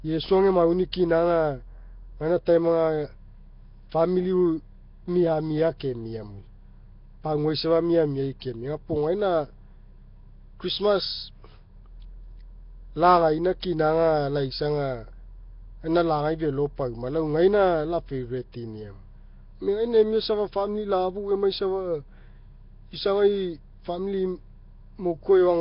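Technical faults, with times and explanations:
Throughout, Nellymoser compression, likely: the speech sounds rough, hissy and underwater, with nothing above 5.3 kHz, which fits a low bitrate around 22 kbps.
8.40 s, pre-echo: a sharp attack gets a short hiss about 19 ms ahead of it, where the codec's block spreads its noise backwards.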